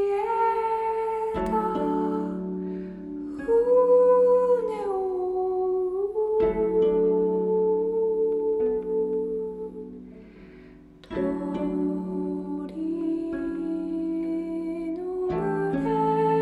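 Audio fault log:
1.28–1.65 s, CD scratch ticks: three evenly spaced ticks, about five a second, each a tiny click or dropout well under a millisecond long. They come from a scratch or blemish on the disc that wipes out more data than error correction can restore. It passes the laser once per revolution, so the player has to interpolate over or briefly mute the damaged samples at that regular rate.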